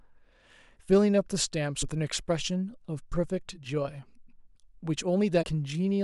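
Damaged data in a compressed stream shows up twice in this speech: a brief blip at 1.81 s and a slightly longer one from 5.41 to 5.44 s, about 24 ms. At each point a run of the encoded bytes is corrupt, so the decoder misreads the affected frame, loses its place in the bitstream and hunts for the next valid frame header. What plays out in that gap is heard as a short glitch cutting into the speech.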